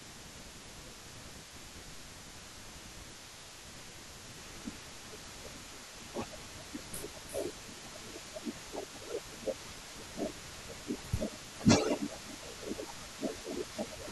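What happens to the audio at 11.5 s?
Around 11.45 to 11.64 s the speech briefly sinks, dropping by around 15 dB at its deepest for about a fifth of a second. This is speech suppressed in double talk: the echo canceller likely mistook the talker for loudspeaker echo while both sides spoke and turned everything down.

Under that dip, a delayed copy of the speech trails about 352 ms behind, only slightly quieter than the original. This is an echo leak, likely from a loudspeaker's sound getting past the far side's echo canceller and being sent back.

Across the whole clip, including this moment, there are twinkling specks in a near-silent background. That comes from overdone noise removal, which cuts individual frequency bands near the noise estimate and takes quieter parts of the speech with them.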